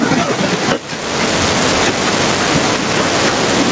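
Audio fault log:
Throughout, gain pumping: the gain swings around 15 dB, squashing loud and soft parts closer in level, likely from excessive gain driving a fast limiter.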